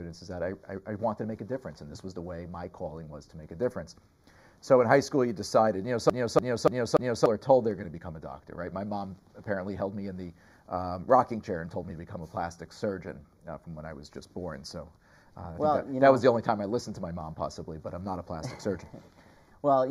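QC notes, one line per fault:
Throughout: channel delay (comb filtering). One channel arrives roughly 0.2 ms behind the other, a lag of only a few samples, and the pair is folded to mono. Content common to both channels cancels at evenly spaced frequencies, with the first notch around 3 kHz and further notches repeating up the spectrum. The result is a fixed hollow, phasey coloration that never shifts over the length of the clip.
6.10 to 7.26 s: CD stuck on one turn. A single 290 ms slice of audio plays back four times in succession, with a brief mute at each jump back. This is the fast, regular stutter of a skipping disc. The pickup is thrown back to the same point once per revolution, so the identical fragment recurs at a fixed rate until playback moves on past 7.26 s.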